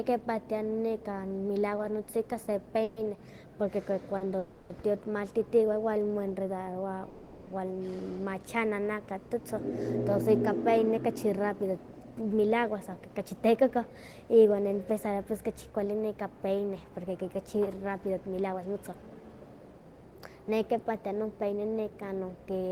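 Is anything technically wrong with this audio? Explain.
Yes. This speech clip has three kinds of network playback fault.

A call audio freeze occurs at 2.83–2.99 s, 4.39–4.73 s (just before "tio timaltiti moenredarowa") and 7.10–7.50 s (just after those words). Packets were likely held up, so the jitter buffer ran dry and the last sound was extended for 0.13, 0.31 and 0.37 s. It is heard as a fading buzz. A spectrogram shows smeared, repeating bands, and the waveform shows a decaying stretch before the speech resumes intact.

A short stall from a late packet occurs at 4.18–4.24 s, just before "tio timaltiti moenredarowa". One packet missed its slot, so the receiver held the previous sound for about 30 ms and then continued. It is heard as a briefly prolonged sound with a faint buzz. The spectrogram shows a short flat, frozen patch.

A jitter buffer speed-up runs from 12.36 to 15.98 s at 110% speed, and from 17.83 to 20.20 s at 113%. 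Excess buffered audio was trimmed by cutting pitch-period-sized pieces, removing roughly 0.4 s and 0.3 s. The speech sounds hurried at unchanged pitch. The waveform looks compressed in time, with tiny splice points.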